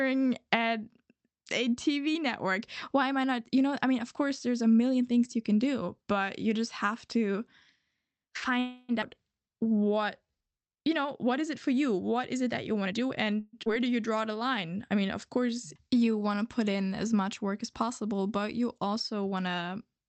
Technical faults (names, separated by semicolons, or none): call audio freeze; skip ahead; jitter buffer slow-down; jitter buffer speed-up